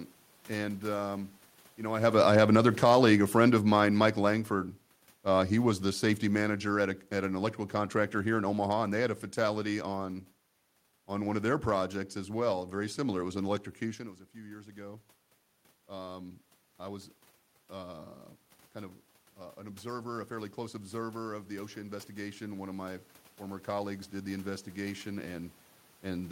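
Just after "and um you", at 1.88 s, automatic gain falling sets in. Around 2 s the talker moves closer, and the level jumps. The gain control judges the input too loud and pulls its gain down slowly. The cut is about 12 dB, spread over nearly eight seconds to 9.67 s. Voice and room noise sink together. The drop is gradual, not a step.

After "was an", at 13.97 s, automatic gain rising begins. Near 14 s the talker moves away, and the input falls by about 14 dB. The gain control now finds the input too quiet. It raises its gain slowly, by about 12 dB, until the clip ends at 26.31 s. The voice swells back up over many seconds. The room noise swells with it.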